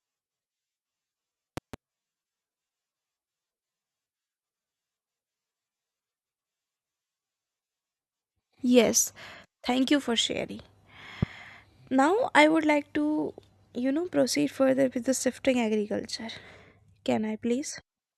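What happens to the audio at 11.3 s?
A single loud pop lands from 11.23 to 11.25 s, rising well above the level of the speech, which carries on underneath without a break. It is most likely a brief voltage spike, from a plug, switch, static discharge or driver glitch, added to the signal and shaped by the circuits after it into one sharp thump. Unlike a dropout or a buffer glitch, nothing is removed or repeated. The pulse simply sits on top of the speech.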